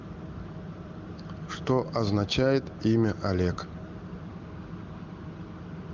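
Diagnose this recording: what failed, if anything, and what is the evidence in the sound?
Nothing in this recording stood out on listening as a failure at any stage of the chain.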